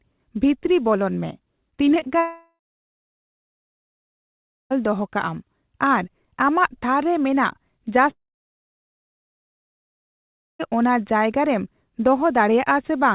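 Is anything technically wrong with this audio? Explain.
Yes. From 1.70 to 2.09 s the speech turns choppy, with small pieces chopped out. This is repeated packet loss (robotic sound): seven short gaps, none longer than about 22 ms, each patched by stretching the last bit of audio before the next gap arrives. About 31% of that stretch is filled-in sound rather than real speech, which gives it the stuttering texture.

Right after, from 2.19 to 4.72 s, and again from 8.10 to 10.75 s, the speech gives way to a brief fading buzz or hiss and then silence, roughly 2.1 and 2.5 seconds of it respectively, before resuming with a chunk of speech simply gone. This is most likely a long network dropout: nothing arrived, the receiver extended the last sound for a moment and then went quiet, so the missing audio is never recovered. Throughout, nothing is heard above 4 kHz, which fits a G.711 mu-law call path at 64 kbps.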